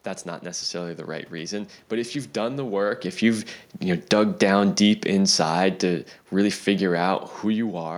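From 2.36 s, just after "reason but if you've", the automatic gain control starts falling and keeps pulling the level down until 7.82 s, about 8 dB in total. It has judged the input too loud, or its background noise too strong, and is backing off its gain gradually, so the speech and the room noise behind it sink together. That shared drop distinguishes it from the talker shifting position around 2.5 s, which changes only the voice level.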